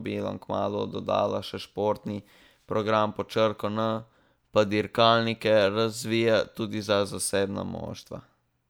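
No technical faults can be heard anywhere in this speech recording.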